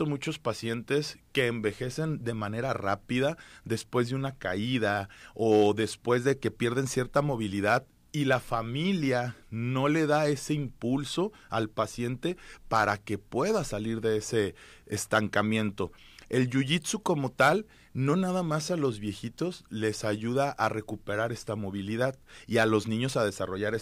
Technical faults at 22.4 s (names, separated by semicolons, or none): none